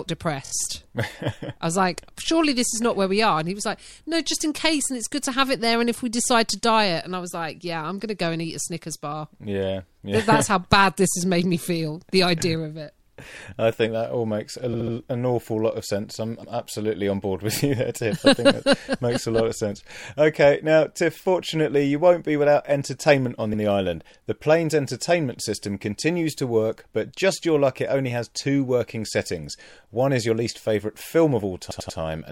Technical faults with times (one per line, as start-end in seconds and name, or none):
0.44-0.51 repeated frames
14.72-14.93 repeated frames
31.70-31.98 repeated frames